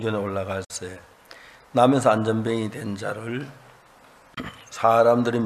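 The audio breaks up twice with a digital broadcast dropout. Sound fades out over about 8 ms at 0.64 s, stays silent, and returns at 0.71 s. A shorter hole follows at 4.34 to 4.38 s. The receiver muted while frames were missing or corrupt. The gaps fit roughly two lost frames and then one.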